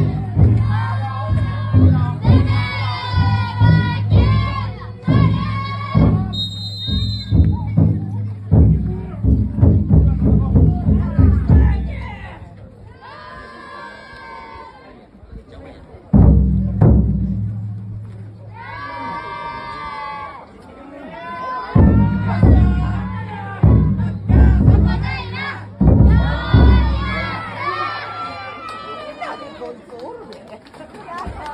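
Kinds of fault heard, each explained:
No technical faults are audible anywhere in the recording.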